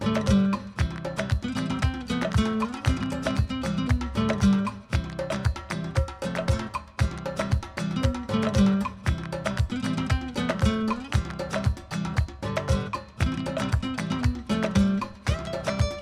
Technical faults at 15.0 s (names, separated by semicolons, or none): none